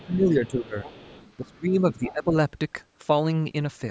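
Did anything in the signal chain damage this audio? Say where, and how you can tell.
Yes. Call processing, the echo canceller: speech suppressed in double talk from 0.0 to 0.86 s and again from 1.38 to 2.33 s, dipping by up to about 15 dB. It is likely the canceller ducking the talker while the far end also spoke, seen as sagging waveform envelope and thinned upper harmonics on a spectrogram.

Same stage: the other side's voice leaking through from 0.46 to 1.56 s, at about 25 dB below the speech, and more strongly at about 20 dB below from 1.92 to 2.13 s. This is likely residual loudspeaker echo left in the microphone path, visible as a faint second set of harmonics interleaved with the talker's. The call band tops out near 8 kHz.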